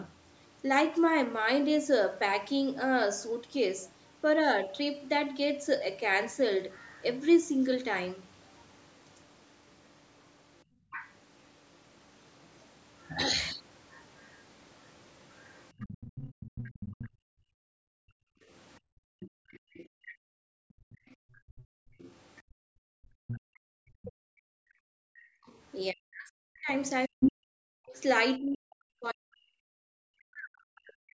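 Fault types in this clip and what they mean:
Other side's voice leaking through: the echo canceller likely failed to remove all of the loudspeaker's far-end signal from the microphone, so a second voice is heard faintly behind the speech, briefly near 6.7 s and then at about 15 dB below it for most of 10.92 to 28.01 s.
Background gated by the echo canceller: while the loudspeaker played, the canceller clamped the microphone down hard, so the room sound vanishes, about 23 dB for a moment at 10.65 s, then up to about 40 dB for roughly seven seconds between 17.1 and 25.46 s.
Speech suppressed in double talk: with both sides talking at once, the canceller likely mistook the talker's speech for echo and turned it down, by as much as about 40 dB, so the speech briefly drops at 22.43 s and is cut away in pieces for roughly four seconds from 25.91 s onward.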